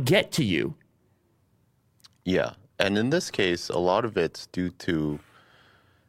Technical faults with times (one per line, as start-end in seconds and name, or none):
none